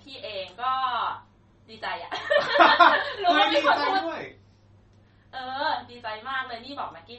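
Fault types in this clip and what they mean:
MP3 compression: The speech has nothing above about 8.3 kHz and a plainly audible watery, swirly texture, likely from an MP3 encoder short of bits, which fits roughly 32 kbps, cutting the treble and letting weak frequency lines flicker on and off between frames.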